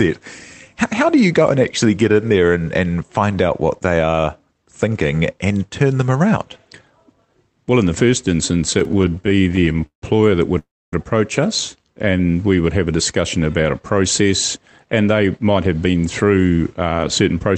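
Just after "in the first instance", from 8.79 to 10.03 s, repeated stalls (stutter) break up the speech. Late packets kept emptying the jitter buffer. About two dozen stalls stretch existing sound, up to 163 ms each, making it drag.

From 10.58 to 10.93 s, before "approach us", a call audio freeze inserts a 341 ms hold. The likely cause is delayed packets. A brief buzz or hiss decays into 270 ms of silence.

Between "approach us" and "we would have a", from 11.87 to 12.18 s, a jitter buffer slow-down repeats pitch periods. It adds 62 ms, so speech runs at 83% speed, drawn out at unchanged pitch.

From 14.03 to 15.94 s, a jitter buffer speed-up trims short pitch-period pieces to cut excess delay. Roughly a fifth of a second is removed. Speech runs at 110%, sounding hurried.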